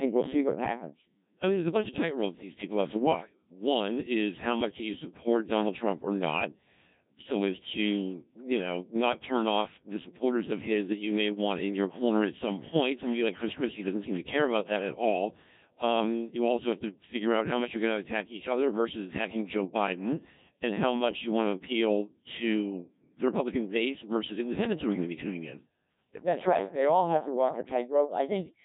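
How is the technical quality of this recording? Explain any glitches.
The speech is poor in quality throughout: robotic, buzzy and synthetic, with nothing audible above 3.8 kHz. This comes from the Codec 2 vocoder, heavily degraded. Codec 2 does not keep the waveform. It sends only pitch, voicing, energy and a rough spectral envelope, and the decoder rebuilds the voice from sine waves. The thinness and mechanical buzz fit a very low rate, around 1.3 kbit/s, where that envelope is coarse.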